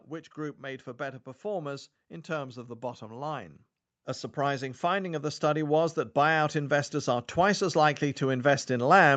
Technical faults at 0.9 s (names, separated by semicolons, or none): automatic gain rising